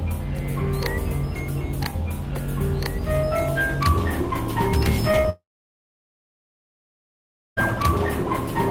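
Short concealed packet loss at 5.11 to 5.15 s and 5.21 to 5.26 s: about 20 ms of the music arrived too late each time, and the receiver extended the preceding sound, leaving brief smears.

Long network dropout from 5.30 to 7.59 s: the music stops, a short fading continuation gives way to about 2.2 s of silence, and it resumes later with roughly 2.3 s missing, likely from a network outage.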